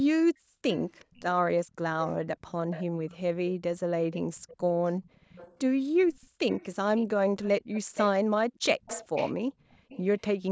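Speech recorded through call microphone processing, with nothing above 8 kHz, shows background gated by the echo canceller. The room sound ducks sharply at 0.11 to 0.63 s (down about 40 dB), 1.65 to 1.76 s (about 23 dB), 5.1 to 5.25 s (about 27 dB), 6.27 to 6.45 s (about 40 dB), 8.39 to 8.54 s (about 40 dB) and 9.51 to 9.89 s (about 25 dB), then returns once the canceller releases. A plain dropout would silence everything, but here the ambience is pulled down while the canceller suppresses the microphone, in bursts of roughly 0.1 to 0.5 s. From 0.71 to 3.17 s and again from 4.12 to 10.0 s, a faint, delayed copy of the speech trails the original by 374 ms and then 393 ms, sitting roughly 15 dB below it. This is likely an echo leak, where a far-end loudspeaker's output reached its microphone and got past the echo canceller. Room reverberation would smear the tail continuously, but this is a discrete repeat at a fixed lag, which points to a returned echo rather than reflections.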